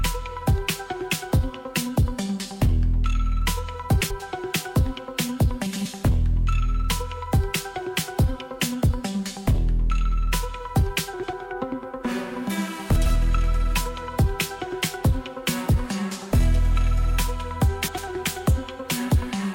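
Frames out of order at 4.00, 5.66, 11.13, 12.95 and 17.88 s: two adjacent runs, each about 96 ms (which fits four frames apiece), play swapped, giving brief garbled flutters.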